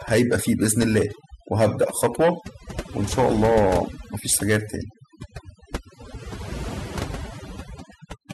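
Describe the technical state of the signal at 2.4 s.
At 2.4 s the speech is under overdone noise removal, which runs throughout the clip. The noise reduction was set too strong, so any frequency band sitting near its noise estimate gets pulled far down or switched off. Quieter parts of the voice are cut along with the noise, leaving a near-silent background sprinkled with twinkling specks. On a spectrogram the gaps look black and patchy, with isolated bright dots scattered between them.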